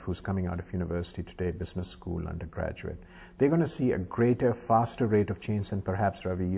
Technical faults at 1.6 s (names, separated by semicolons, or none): none